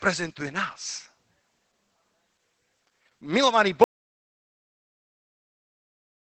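From the start, the speech carries plainly audible Opus voice compression. The coder is running its SILK linear-prediction mode in wideband, so the highest frequencies are cut off and the remaining band is coded in 20 ms frames with a coarsely quantised excitation. The result is muffled, slightly hoarse, faintly robotic speech, a character that points to a low bitrate of around 12 kbps.

At 3.84 s the audio drops out to silence and stays silent to the end of the clip, a gap of about 2.4 s. The gap is silent, with no room tone left. The likely cause is that the input was lost, through a disconnected device, a failed link or a mute, while recording continued. Whatever followed that point is missing.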